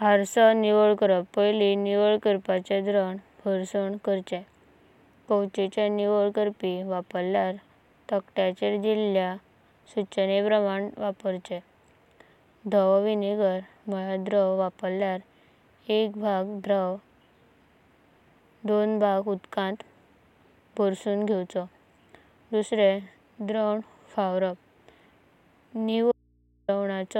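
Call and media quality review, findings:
Dropped buffer (overrun), 16.64 s: small forward jump in the speech, a few milliseconds missing. Likely capture-side overrun, with samples overwritten before being read. Waveform shows an abrupt step discontinuity. Spectrogram shows a thin full-band vertical line.

Dropped buffer (overrun), 23.85 s: same symptom, a brief skip ahead with no silence. The similar small loss points to the same short-buffer overrun. It shows the same way: a waveform splice step and a single broadband spectrogram stripe.

Audio dropout to a faint residue, 26.12–26.68 s (0.57 s): speech cuts abruptly and returns abruptly. The gap holds only mains hum, about 40 dB below speech level. The likely cause is an input path disconnect with live downstream. Waveform is near-flat, and the spectrogram shows only low hum lines.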